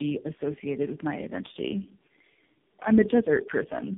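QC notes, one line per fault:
Throughout: tandem speech coding. The speech is rough, muffled and warbly, with nothing above 3.7 kHz. This fits four speech codecs in a row, likely ending in AMR-NB. Each one re-encodes the previous coder's degraded output, so their artefacts stack.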